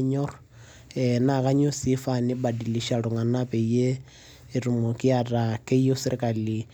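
Listening through the speech recording, nothing stood out as a technical fault at any point.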